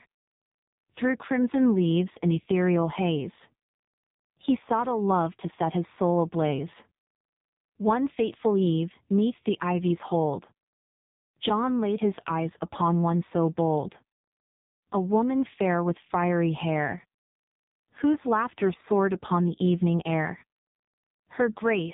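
Speech heard through an AMR narrowband mobile codec for the whole clip: nothing passes above about 3.8 kHz, and the voice is buzzy and synthetic, as the vocal-tract model is driven by very few pulses per frame. That heavy damage fits a low mode, around 5.9 kbps.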